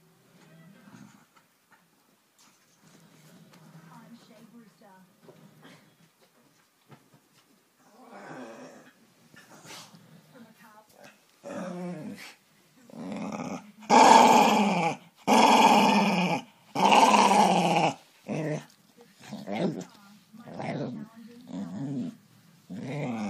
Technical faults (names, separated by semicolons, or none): damaged data in a compressed stream